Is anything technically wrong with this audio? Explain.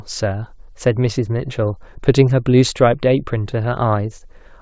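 No, nothing in this speech clip points to a technical fault. It has the band-limited sound of a call path, with nothing above 8 kHz, which fits a wideband call codec such as G.722.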